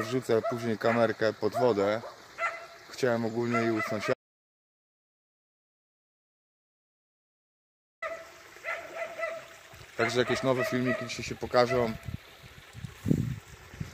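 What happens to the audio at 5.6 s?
At 5.6 s you're right in the middle of an audio dropout to silence that runs from 4.14 s to 8.02 s, so close to 3.9 s of the sound is simply gone. The cut is abrupt, and the gap is dead silence with no room tone at all. That points to the input likely being lost, through a disconnect or a stray mute, while the recorder carried on writing silence until the signal came back mid-flow.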